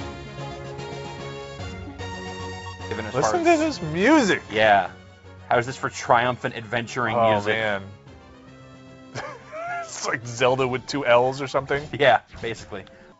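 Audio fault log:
No faults heard.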